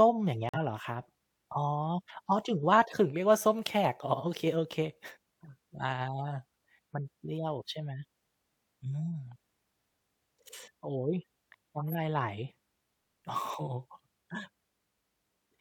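The clip is speech with two compressed-frame faults. The first is a corrupt frame muted. From 0.49 to 0.63 s the sound drops abruptly to silence for about 0.14 s, which fits roughly three frames. Flipped bits made the decoder reject those frames, and the player filled the gap with silence. Timing stays intact. The second is a corrupt frame decoded. From 11.79 to 11.95 s there is a short burst of misplaced energy, like a squeak or noisy blip, peaking around -25 dBFS. Damaged bits garbled gains or codes across a few frames, and the decoder played them anyway.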